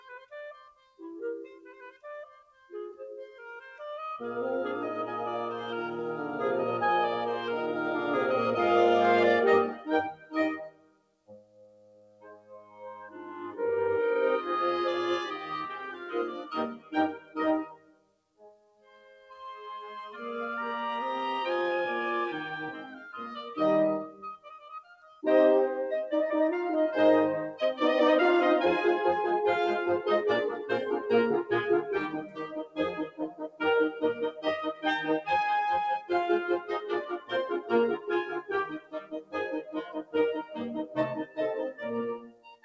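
A speech-tuned noise suppressor was left running on this music, treating sustained tones and ambience as noise, so the level swings by roughly 15 dB and held sounds pump and thin while attacks come through. Sound cut by the noise suppressor appears at 0.0–1.0 s (about 17 dB down), 1.73–2.71 s (about 16 dB), 9.75–13.6 s (about 19 dB), 15.92–20.17 s (about 19 dB), 22.87–23.06 s (about 5 dB), 24.07–25.23 s (about 15 dB), 32.23–34.86 s (about 18 dB) and from 36.6 s to the end (about 19 dB), with sustains sinking and decays cut short. Nothing reaches above 8 kHz, which fits a wideband call codec such as G.722.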